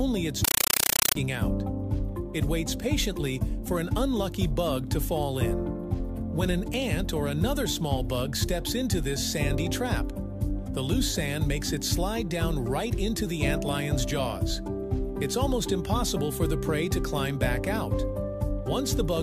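From 0.44 to 1.15 s the sound gives way to very loud, chattering static pulsing 31.25 times a second in 8 ms bursts. It is a compressed stream played as audio: an AC-3 bitstream, consistent with a 384 kbps encode, output as raw samples without decoding.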